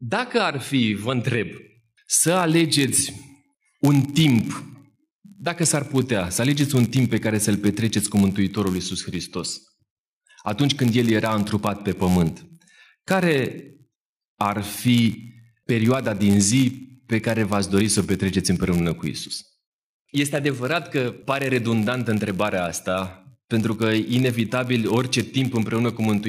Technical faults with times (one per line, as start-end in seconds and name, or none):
1.51-26.28 block size mismatch (padded)